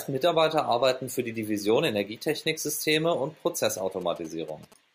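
A nearby 2G phone sending signalling traffic emits short groups of radio bursts that the audio circuit rectifies. From 3.69 to 4.74 s, these GSM signalling bursts form a galloping dit-dit-dit of brief 217 Hz buzzes, roughly 25 dB under the speech.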